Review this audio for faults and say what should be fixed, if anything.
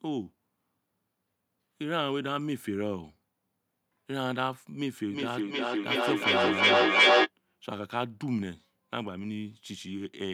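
A feedback echo between two devices runs from 5.11 to 7.31 s: a second device in the same room is playing back this microphone's signal, the microphone picks it up again, and neither echo canceller removes the other device's output. The speech returns roughly every 0.4 s, each repeat thinner and more ringing, and the loop builds until the repeats peak about 10 dB above the speech itself. To prevent it, mute the microphone and speaker on all but one device per room, or use headphones.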